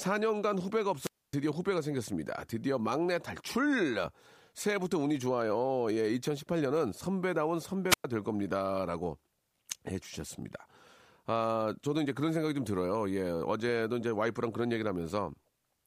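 Wireless microphone squelch dropout at 0.99 to 1.33 s and again at 7.89 to 8.04 s: the analogue radio link weakens, hiss swells, then the receiver's squelch gates the speech to near silence for 0.27 s and 0.11 s before it returns.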